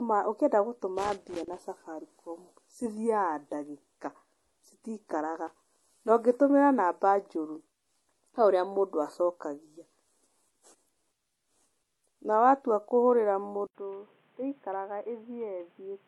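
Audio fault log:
throughout: transcoding between lossy codecs. The audio was likely encoded to MP3 and then re-encoded to HE-AAC, each codec adding its own smearing on top of the other's. Nothing is heard above 12.1 kHz, and the layered artefacts fit a chain of roughly 48 then 40 kbit/s.
0.99–1.62 s and 5.47–5.64 s: loose connector crackle. A worn or dirty contact made and broke the signal path rapidly, chopping the sound. Each stretch is heard as an irregular burst of scratchy crackle over the speech.
13.67–16.07 s: input switched to a poorer device. Right after "watua kũhũrĩra" the recording likely changed to a narrower-band input, leaving 80 ms of silence at the switch. The speech then turns dull and boxy, with nothing above 3.8 kHz. It is about 10 dB quieter, over new background noise roughly 30 dB below the speech.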